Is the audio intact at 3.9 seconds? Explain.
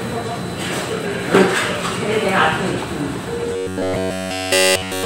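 No. At 3.9 seconds the clip is inside a stretch of robotic sound from repeated short buffers, running from 3.53 to 5.05 s. The sound becomes a rigid metallic buzz at about 93.8 Hz, which points to the same chunk of roughly 10.7 ms being replayed, likely because new audio arrived too seldom. All of that span is repetition. Unlike a stutter, which loops longer, audible chunks, this repeat is short enough to fuse into a steady pitch.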